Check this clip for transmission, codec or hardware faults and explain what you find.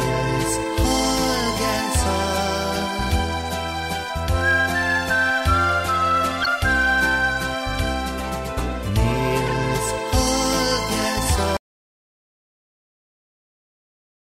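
Two kinds of fault are audible: two bursts of corrupt decoded frames and a dropout to silence at the end.

Corrupt frame decoded, at 6.41–6.47 s and 9.48–9.53 s: damaged compressed frames were decoded anyway, with misread gains or codes scattering energy across wrong frequencies. The result is short noisy blips peaking near about −10 and about −15 dBFS. A spectrogram shows brief vertical smears spanning a few frames.

Audio dropout to silence, from 11.57 s to the end: the sound cuts off abruptly and never returns, leaving silence with no room tone. The likely cause is a lost input while recording continued. The waveform drops to a flat line, and the spectrogram goes fully blank.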